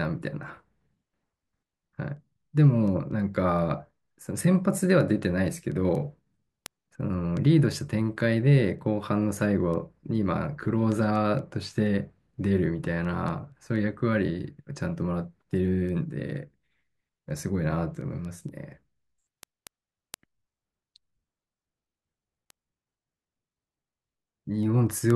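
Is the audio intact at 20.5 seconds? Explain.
No, 20.5 s falls inside a run of word clock ticks lasting from 0.28 to 25.10 s. The receiving clock drifts around 100 ppm from the sender's, so a single sample slips about every 0.2 s, giving a steady ticking roughly five times a second.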